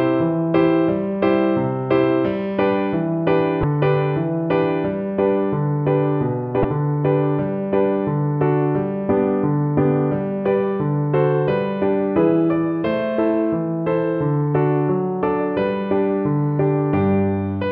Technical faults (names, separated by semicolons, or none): damaged data in a compressed stream